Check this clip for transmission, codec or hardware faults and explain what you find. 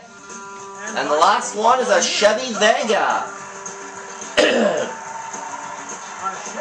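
No transmission, codec or hardware faults found.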